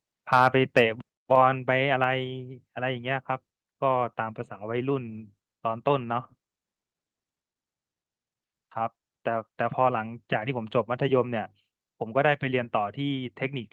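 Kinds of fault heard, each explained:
microphone overload: harsh crackle on peaks near 0.32 and 0.76 s, likely from input gain set too high, so peaks about 2 to 4 dB over the limit were flattened.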